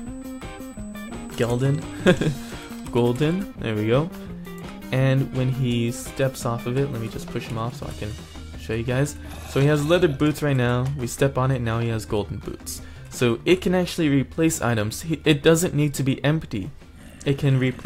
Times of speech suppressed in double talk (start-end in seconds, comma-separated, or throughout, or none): none